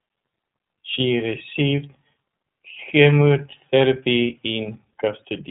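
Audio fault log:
Throughout, iLBC codec: nothing above 3.8 kHz, and the speech comes out rough and a bit synthetic, which fits iLBC's 30 ms-frame mode at about 13 kbps.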